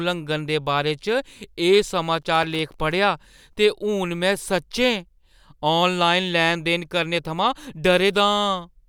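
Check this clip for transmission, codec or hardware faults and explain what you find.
There's one fault here: a burst of processor overload crackle from 2.22 to 2.92 s. For about 0.7 s the processor couldn't finish its audio buffers on time, and each missed deadline got filled with silence instead of sound. The gaps are tiny, which fits very short buffers just under a millisecond, and there look to be something like fifteen of them. Each drop has hard edges, so together they come across as a gritty, tearing crackle riding on the speech, and it clears up once the load drops.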